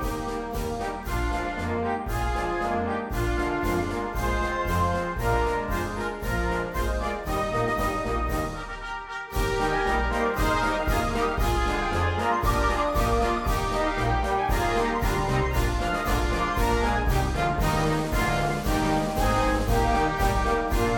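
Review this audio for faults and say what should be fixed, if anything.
Nothing here needs fixing, so you can leave this one as it is.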